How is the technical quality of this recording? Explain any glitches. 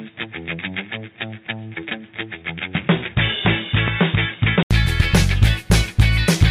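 The technical quality is compromised for most of the recording. From the start to 4.71 s, the sound is dull and boxy. Nothing reaches above 3.8 kHz. The level sits about 5 dB lower, and faint background noise is present well under the signal. At 4.71 s there is a short gap of about 80 ms, and then the sound opens up and clears. The likely cause is the input switched to a poorer device, such as a narrowband headset, before returning to the better input.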